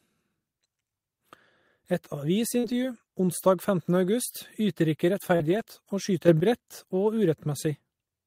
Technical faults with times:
2.59-2.65 short concealed packet loss
2.63-2.73 lost packet rebuilt from error correction
5.35-5.42 short concealed packet loss
5.40-5.62 lost packet rebuilt from error correction
6.28-6.40 sudden gain jump

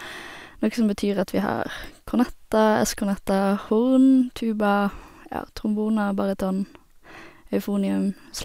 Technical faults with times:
none

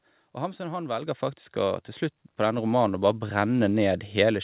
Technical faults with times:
1.02 microphone volume stepped up
2.58 microphone volume stepped up
3.60 microphone volume stepped up

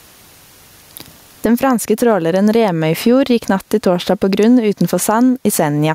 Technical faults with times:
0.00-5.95 gain pumping

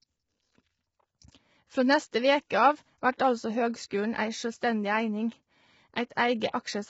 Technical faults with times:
0.00-6.89 low-delay AAC compression
2.11 pre-echo
6.15 pre-echo
6.51-6.54 pre-echo

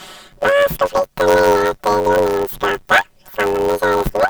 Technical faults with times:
0.00-4.30 planar audio read as interleaved

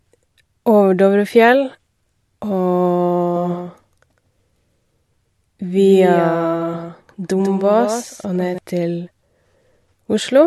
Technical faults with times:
3.36-8.58 doubled audio track

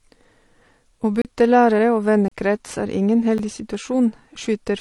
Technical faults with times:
0.00-4.80 transcoding between lossy codecs
1.22-1.25 block of digital silence
2.28-2.31 block of digital silence
3.38 block of digital silence
3.74 audio missing between chunks

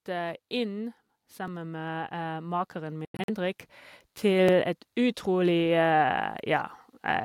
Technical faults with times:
0.05-3.65 automatic gain rising
1.48 overlapping chunks
3.05-3.30 Bluetooth dropout
4.21-6.75 automatic gain rising
4.48 overlapping chunks

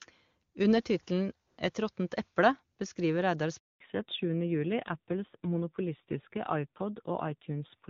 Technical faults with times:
3.58-3.80 handover gap
3.80-7.90 fallback to narrowband

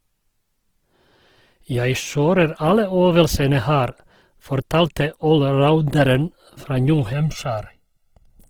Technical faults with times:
0.00-8.50 Opus compression
7.13-8.50 channel delay (comb filtering)

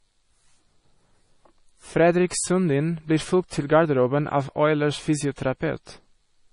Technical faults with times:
0.00-6.53 MP3 compression
3.48-3.52 pre-echo
5.36-5.38 pre-echo

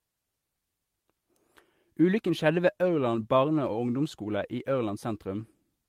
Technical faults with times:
none

